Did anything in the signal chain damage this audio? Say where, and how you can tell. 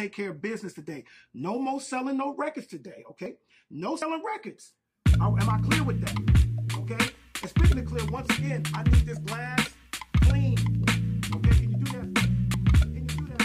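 Yes: jumps at 3.26, 4.02 and 12.54 s, each skipping around 70 ms of audio, likely a dropped buffer (overrun) at the driver stage.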